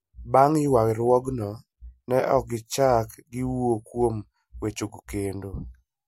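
From 0.13 to 6.02 s, faint clock slip clicks tick through the speech about every tenth of a second. Each is a single dropped or repeated sample, likely from two unsynchronised clocks roughly 200 ppm apart. A spectrogram shows regularly spaced vertical lines, and the waveform shows one-sample jumps.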